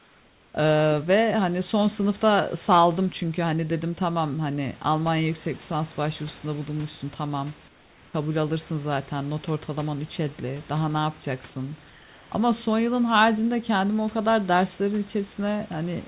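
Comfort noise in place of the background runs from 0.00 to 0.54 s. The room sound is replaced by a flat, featureless hiss about 4 dB quieter, sitting about 33 dB below the loudest speech. The likely cause is discontinuous transmission: the sender stopped sending during silence and the receiver synthesised noise to fill the gap.

An onset clipped by the voice detector follows at 0.52 s. About 20 ms of the speech start is missing, so it begins abruptly without its soft attack. The likely cause is a voice detector that reacted late to the returning sound, with comfort noise covering the lost start.

The same comfort noise substitution returns from 7.68 to 8.14 s, where the background drops by about 5 dB, and from 11.90 to 12.32 s, where it drops by about 3 dB. In both stretches the textured room sound gives way to smooth, even noise until speech resumes. Across the whole clip nothing is heard above 4 kHz, which fits a G.711 call path.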